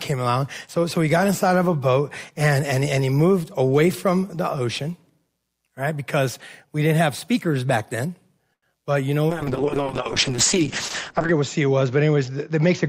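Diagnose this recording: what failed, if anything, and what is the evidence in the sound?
A short stall from a late packet hits the network and jitter-buffer stage. Right after "have speakers back then", at 8.53 s, the sound freezes and is held for about 90 ms, until 8.64 s. Nothing is skipped afterward. The packet arrived late and the buffer ran dry. The receiver stretched the last sound to bridge the gap, then resumed at the same point. Everything after plays about 90 ms later.

A call bitrate drop follows in the codec stage. After "you know", from 9.3 s to the end, the speech turns rough and watery. The top end is gone, with content stopping near 8 kHz instead of reaching 20 kHz. The worst stretch lasts about 2 s. The bandwidth estimate fell, and the encoder was told to spend far fewer bits. That fits a drop from around 64 kbps to roughly 7 kbps, with Opus narrowing the band to cope.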